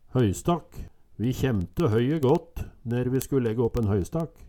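From 0.13 s to 4.45 s, word clock ticks run through the audio: sharp clicks of uneven strength, roughly fourteen per second. The receiving device's clock is not locked to the sender's, and they drift apart by a few hundred parts per million. Each time they slip, one sample appears to be dropped or repeated. On a spectrogram this shows as evenly spaced thin vertical lines across the whole band. The waveform shows single-sample discontinuities about 0.07 s apart.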